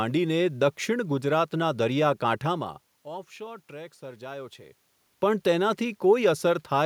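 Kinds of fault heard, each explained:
Nothing stood out on listening to the speech; the room noise and the changes in level as the talker shifted position belong to the recording itself.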